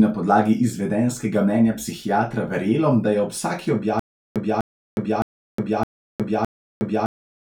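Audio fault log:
3.99–7.41 s stutter with silent gaps: after "da je ob vsaki", a 250 ms fragment repeats five times, every 613 ms, with 363 ms of flat silence between; likely a stalled stream retrying; waveform shows identical blocks separated by empty gaps.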